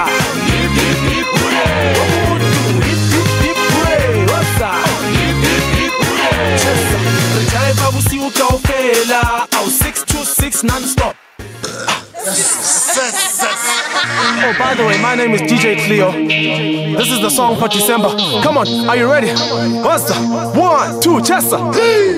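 Gain pumping runs through the whole clip, from start to finish. The level swings by roughly 10 dB. The likely cause is input gain set far too high for the microphone, with a fast limiter or compressor clamping down on every peak and releasing in the gaps. Loud and soft passages sit unnaturally close in level, giving a squashed, breathing character.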